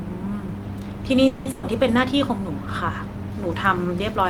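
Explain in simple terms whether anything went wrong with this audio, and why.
Two faults hit this speech, close together. From 1.27 to 1.48 s there is a call audio freeze. The sound stalls and the last bit is stretched into a fading buzz or hiss for about 180 ms. This is likely packets arriving late. Then the speech carries on with nothing lost, just 180 ms behind.

Right after, from 1.51 to 1.66 s, comes a burst of packet loss. About 120 ms of audio never arrived in time. The receiver filled the hole by holding and fading the last sound. When the speech returns, that 120 ms is simply gone.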